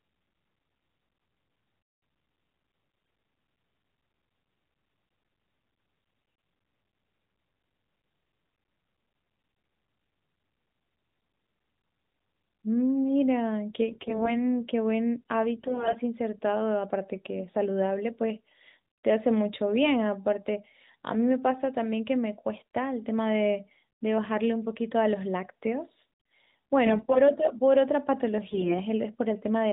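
It's a speech clip carried over AMR narrowband mobile coding, likely at a rate like 12.2 kbps. It has six bursts of AMR bit errors at 2.90–3.14, 5.96–6.54, 13.88–14.44, 15.56–15.99, 26.86–27.20 and 28.50–28.80 s. In each one, roughly a tenth to a fifth of the weakly protected bits get flipped, so the voice turns hoarse, scratchy and gargly while its pitch and level stay about the same.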